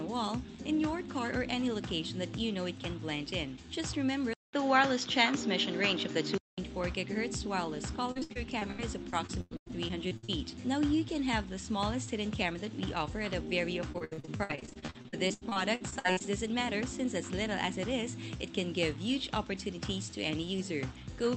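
From 4.33 to 6.58 s the input likely switched to a poorer device. After a 200 ms silence, the band stops at 7.3 kHz, new noise sits about 35 dB below the signal, and the level shifts by about 5 dB, so the sound turns duller and boxier.

Repeated packet loss then strikes twice. From 8.11 to 10.30 s, 17 gaps (longest 100 ms) are patched by stretching earlier sound, concealing 29% of the span. From 13.92 to 16.22 s, 28 gaps (longest 77 ms) cover 38%, giving choppy, robotic sound.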